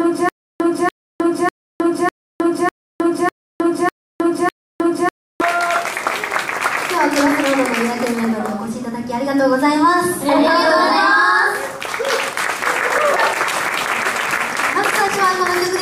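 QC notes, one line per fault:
0.00–5.41 s, stutter with silent gaps: playback likely stalled, replaying its last fragment at each retry, then running empty. Already under way at the start, a 288 ms burst returns eight times every 600 ms, with 312 ms of digital silence between. The missing audio is lost.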